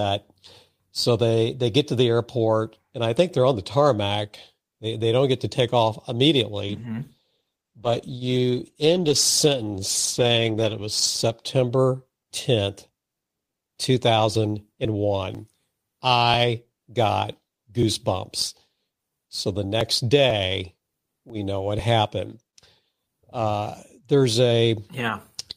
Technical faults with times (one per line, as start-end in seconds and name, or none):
6.62-11.91 call bitrate drop
14.35-21.79 periodic USB or driver dropouts